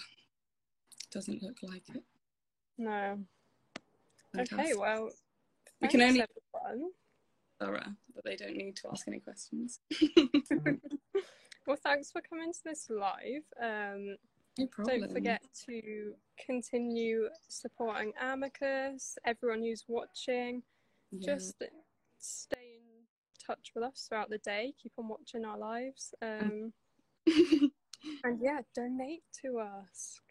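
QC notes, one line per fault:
22.54–23.34 s, one channel inverted: in mono the centre content collapses by about 24 dB for 0.8 s, leaving only a faint side residue, not silence as in a dropout, which points to one stereo channel likely having reversed polarity so the shared content cancels.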